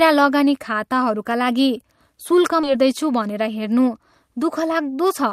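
At 2.63 to 2.65 s there's a skip ahead: roughly 0.7 s of speech got dropped, and playback jumps straight across with no gap. Then from 3.25 to 3.63 s a jitter buffer speed-up trims a few tens of milliseconds in tiny pitch-period slices, so the speech runs about 10% fast and sounds hurried at unchanged pitch.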